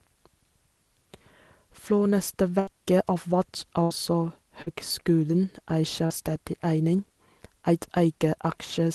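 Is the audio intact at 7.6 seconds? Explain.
Yes, the speech at 7.6 seconds is intact, with nothing more than the ordinary band-limited sound of the Opus call codec, whose 12 kHz bandwidth fits a path running at around 24 kbps.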